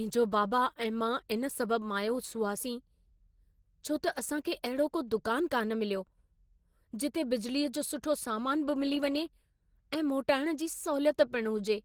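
A speech recording with plainly audible Opus compression damage from start to finish: the voice sounds hoarse, rough and grainy rather than swirly, with a muffled quality. This fits the codec's hybrid speech mode, likely at a low bitrate around 16 kbps. On a spectrogram, energy reaches up to about 20.2 kHz, but the upper bands look smeared and noise-filled instead of showing crisp harmonic detail.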